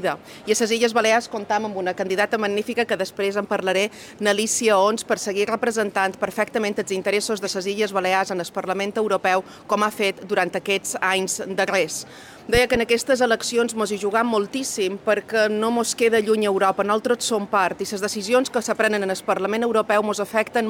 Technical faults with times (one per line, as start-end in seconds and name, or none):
12.55-12.78 loud pop